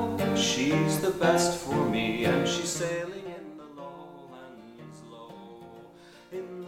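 No technical faults are audible.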